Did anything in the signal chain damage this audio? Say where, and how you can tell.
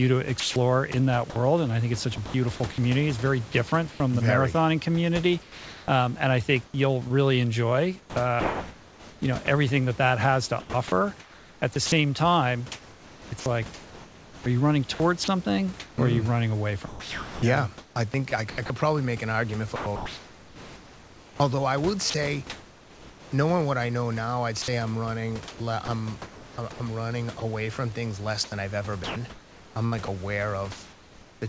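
Yes. At the call-processing stage, the sender's voice detector likely toggled transmission on and off within three stretches: 0.4–4.0 s, 5.4–22.1 s and 24.6–31.4 s. In each, low-level speech and word edges drop out and synthetic comfort noise replaces them, about 0.58 s, 6.1 s and 2.1 s respectively. The result is choppy speech. This is sound chopped by the voice detector, within the G.722 path, whose band ends at 8 kHz.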